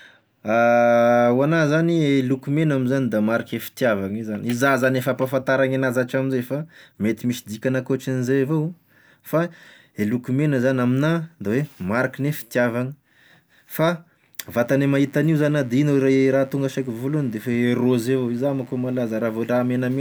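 From 14.43 s to the end of the speech, a steady, raspy mains buzz sits underneath, some 30 dB below the voice. Switching spikes, twice in every 50 Hz mains cycle, leak in, and on a spectrogram they show as evenly spaced horizontal harmonic lines of 50 Hz reaching into the kilohertz range.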